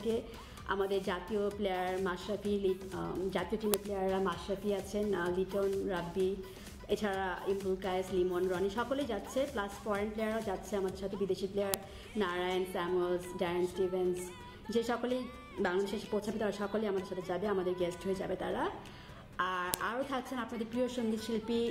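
Sharp clicks hit at 3.74, 11.74 and 19.74 s, 8 s apart. This is a file header played as audio. Each new piece's header bytes sound as a snap.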